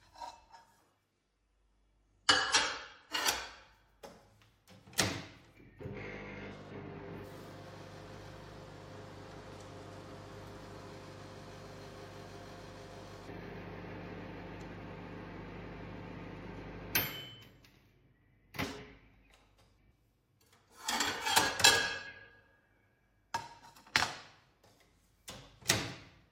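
From 1.11 s to 3.11 s the everyday sound loses its top end abruptly, with nothing above about 11.2 kHz, and takes on a duller, smeared texture before full brightness snaps back, with no gap at either edge. This is an adaptive stream at a lower bitrate. The connection slowed, so the player switched for two seconds to a leaner MP3 version. The sound points to roughly 46 kbit/s against 128 kbit/s elsewhere.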